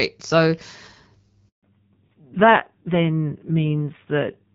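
A handover gap runs from 1.49 to 1.63 s. The call was being passed between networks, and for about 140 ms no speech frames got through. The speech fades out over a few tens of milliseconds and then drops to silence until the new link picks up. Whatever was said in that stretch is simply missing, not muffled or garbled, which is the mark of frames that never arrived.

A fallback to narrowband follows at 1.63 s and lasts to the end of the clip. Before the switch, the audio has the fuller top end of HD Voice, with light coding texture consistent with AMR-WB at around 12.65 kbit/s. Afterwards, nothing above 4 kHz survives, so the speech turns duller and loses its crisp consonant detail. It also becomes rougher and grainier, which fits a low-rate AMR-NB mode around 5.9 kbit/s rather than merely a bandwidth cut.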